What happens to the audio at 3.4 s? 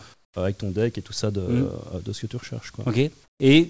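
Comfort noise in place of the background, 3.24 to 3.40 s: a steady, featureless hiss about 12 dB quieter, likely synthetic filler while the sender paused transmission.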